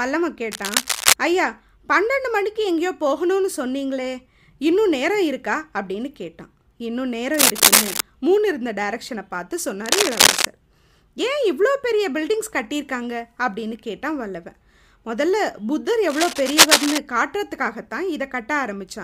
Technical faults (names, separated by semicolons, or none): cable scratch noise